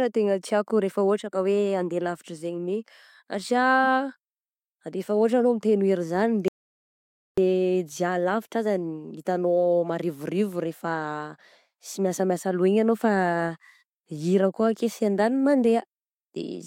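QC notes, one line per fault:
6.48–7.38 s, audio dropout to silence: the speech cuts off mid-flow into about 0.89 s of silence with no room tone, unlike a natural pause or noise gate, then resumes on "dià labitra aza hitanao"; likely an input loss while recording continued.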